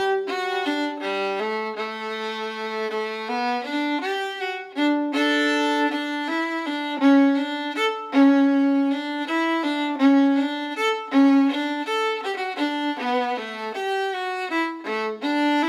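No technical faults can be heard anywhere in the audio.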